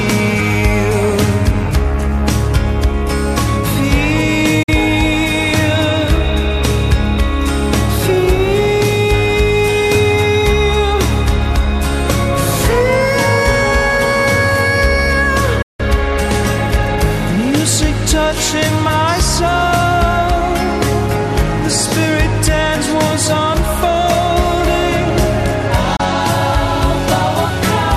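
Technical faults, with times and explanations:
4.63–4.69 s, 15.62–15.80 s, 25.96–26.00 s: digital broadcast dropout. The sound fades out over about 8 ms, falls silent, then returns. The holes last roughly 48 ms, 168 ms and 24 ms, which fits the receiver discarding two, seven and one 24 ms frames that failed their check. It mutes rather than play corrupted data, so whatever was transmitted during each gap is gone for good, not delayed.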